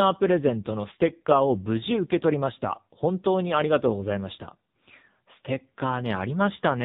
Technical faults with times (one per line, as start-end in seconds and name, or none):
0.00-6.84 AMR narrowband mobile codec